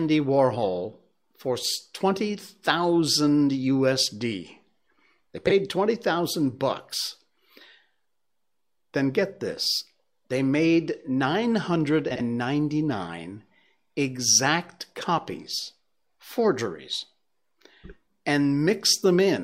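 Speech with frames out of order at 5.47–5.51 s and 12.11–12.21 s. Neighbouring blocks of 23.2 and 46.4 ms, which fits one- and two-frame runs, play swapped, causing brief garbled flutters. Unlike a dropout, no time is lost.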